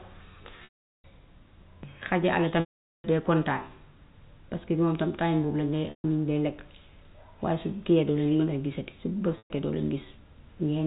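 Packet loss with pitch repetition breaks up this speech at 0.64–1.04 s, 2.60–3.04 s, 5.90–6.04 s and 9.38–9.50 s. The receiver fills each gap by repeating the last pitch period. The two longer gaps, of 400 and 440 ms, fade into silence before the speech returns. The shorter 140 and 120 ms gaps also fade into silence after about 50 ms of repetition. The audio is carried as G.711 telephone coding, band-limited below 4 kHz.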